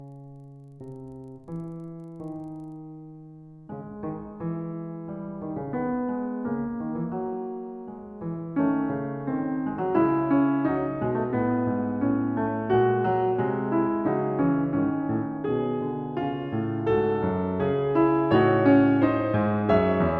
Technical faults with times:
0.00-2.76 resampler restarted on every block

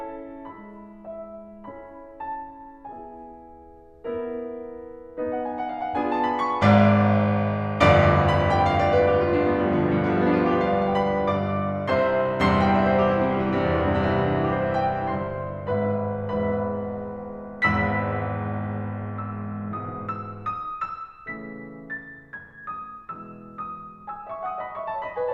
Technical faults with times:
none

